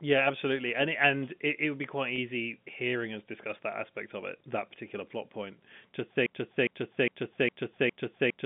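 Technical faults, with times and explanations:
2.16 to 2.18 s, packet loss with pitch repetition: A 20 ms gap, consistent with a single lost packet, was bridged by the receiver repeating the last pitch period instead of leaving silence. The loss is short, so the repeated cycle never fades to nothing. The speech holds briefly on a slightly buzzy, static tone, then continues. The effect is a tiny mechanical sustain rather than a dropout.
6.26 s to the end, broken-record loop: From 6.26 s a 0.41 s fragment plays back to back, exactly the same each time, five times until the clip ends, and it stays within the 150 Hz to 3.5 kHz telephone band of the G.711 line. The likely cause is a stalled player, encoder or stream that kept resending the last fragment it held. The speech that should have followed is lost.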